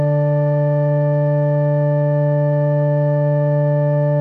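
A music clip with a time-stretched section running from 0.84 s to the end at 4.2 s. The pace drops abruptly to 0.66 times the original while pitch stays put, likely from software padding the length by repeating short segments.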